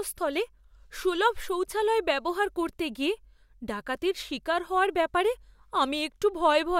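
Nothing in the speech stood out as a technical fault on listening.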